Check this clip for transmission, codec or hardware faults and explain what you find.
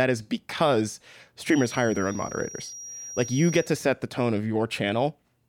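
A thin, steady whistle near 5.7 kHz runs under the speech from 1.39 to 3.72 s, starting after "is because" and fading before "set the tone of", sitting roughly 15 dB below the voice and swelling and fading slowly in level. This is a feedback whistle, likely from a loudspeaker-to-microphone loop held right at the edge of oscillation.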